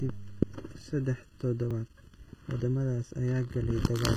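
Channel delay (comb filtering) runs through the whole speech clip. One channel lags the other by a fraction of a millisecond, and summing them cancels shared content at evenly spaced frequencies, starting near 700 Hz. The voice sounds hollow and phasey.

HE-AAC compression is the likely cause of plainly audible codec damage throughout. The treble is rebuilt from copied lower bands rather than coded directly, which fits a very low bitrate. Its harmonics don't align with those below, so sibilants sound gritty and metallic.

Dropped buffers (overrun) occur at 0.81 s, 1.71 s and 2.60 s. Each is heard as the speech jumping forward, with about 10 ms missing at the first and about 20 ms at the others. The likely cause is samples being overwritten before they were read, leaving the two sides spliced together without silence.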